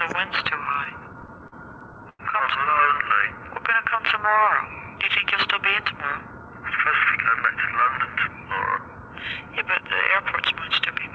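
From 0.66 to 2.21 s the audio shows repeated stalls (stutter): packets arrived late, the jitter buffer kept running dry, and the receiver stretched the last sound over 15 gaps, the longest 98 ms. That covers 273 ms, 18% of the span, so nothing is lost but the sound drags and stutters.

Between 3.28 and 4.02 s a jitter buffer slow-down plays the audio at 90% speed. With a low reserve, the receiver repeated pitch periods and pause fragments, adding 83 ms. Sounds are drawn out without any pitch change.

From 6.03 to 7.86 s a jitter buffer speed-up runs at 107% speed. The buffer held more than its target, so the receiver trimmed short pitch-period pieces, removing about 150 ms. The audio sounds hurried at unchanged pitch. Throughout, the call path's band limit leaves nothing above 8 kHz.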